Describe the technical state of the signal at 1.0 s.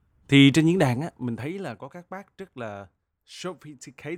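At 1.0 s the speech is inside a stretch of zipper noise running from 0.75 to 1.76 s, between "thì trên diễn" and "có các bác rất". The level falls by about 15 dB in unsmoothed steps, around 30 per second, each leaving a small click. The result is a fine ticking over the sound. A waveform shows a staircase envelope, and a spectrogram shows faint, evenly spaced vertical lines.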